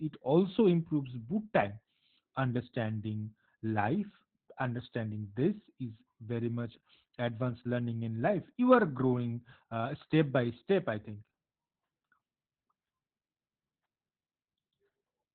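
From start to finish the speech sounds muffled, hoarse and faintly robotic, with nothing above about 4.4 kHz. That is heavy Opus voice compression: its SILK coder, squeezed to narrowband, codes the excitation coarsely, which fits a bitrate near 8 kbps.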